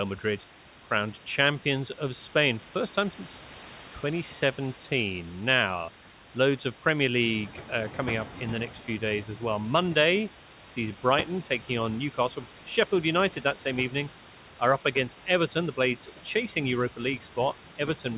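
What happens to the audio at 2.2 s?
At 2.2 s the noise suppressor, active for the whole clip, is working against the room noise, which sits about 24 dB below the speech there. It treats each band it judges to be steady noise as something to remove and cuts it by about 17 dB frame by frame. The noise floor dips in the gaps and comes back under the speech, all within the call path's band, which stops at 4 kHz.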